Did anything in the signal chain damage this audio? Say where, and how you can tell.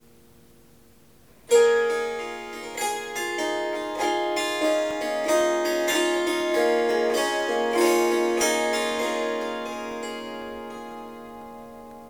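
Yes. The damage happens at the driver or buffer stage, as periodic USB or driver dropouts. From 4.41 s to 11.91 s there is a tick every 0.5 s, about fifteen in all. Each one is a gap of roughly half a millisecond where the signal drops to silence, most likely because a background task stalls the USB bus or audio driver on a fixed schedule. The strict clock-like spacing sets this apart from network packet loss or crackle from a bad connection, both of which come at irregular intervals.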